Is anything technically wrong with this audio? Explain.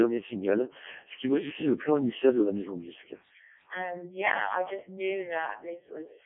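Yes, the whole clip has gone through the Codec 2 vocoder. Only pitch, voicing, energy and a rough spectral envelope survive, rebuilt from sine waves, so the speech sounds robotic and buzzy, confined to about 250 Hz to 3.4 kHz, with heavy damage that fits the 0.7 kbit/s mode.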